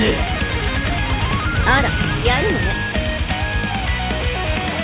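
No faults can be heard anywhere in this clip.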